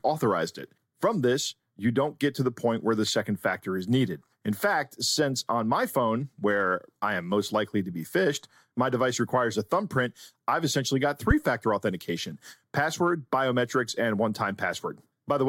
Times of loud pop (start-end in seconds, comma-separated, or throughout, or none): 11.31-11.33